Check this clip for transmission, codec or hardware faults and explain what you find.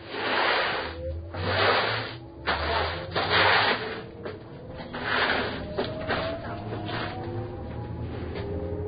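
One codec fault runs through the whole clip. Throughout, the sound is hissy and grainy with nothing above 4.9 kHz, likely Vorbis compression at a very low bitrate (around 17 kbps) replacing treble detail with noise.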